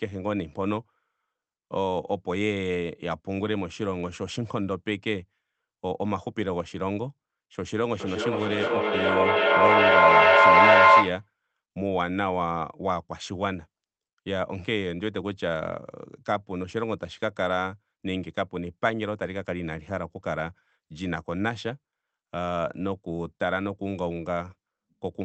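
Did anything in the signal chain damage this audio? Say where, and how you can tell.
Yes. The damage happens in call processing, as feedback echo between two devices. From 7.79 s to 11.29 s, a second device in the same room plays the far end back into a nearby microphone. Each device's echo canceller removes only its own playback, so the sound keeps coming round at a steady interval of roughly 0.4 s. The repeats grow thinner and more ringing, and they build to about 12 dB above the speech instead of fading. Through the 8 kHz-wide call codec they stay clearly audible.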